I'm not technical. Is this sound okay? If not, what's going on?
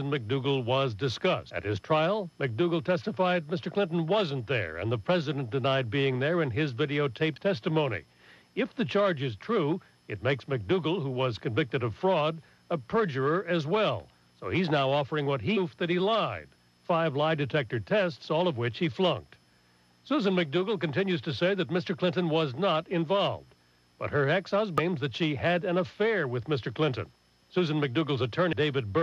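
No. There are five very short glitches, at 1.49, 7.36, 15.56, 24.78 and 28.52 seconds, each a brief chirp or blip. This is damaged data in a compressed stream: a few bytes of the compressed file are wrong or missing at those spots. The player can't make sense of that stretch, loses its place, and skips to the next point where it can pick the audio up again.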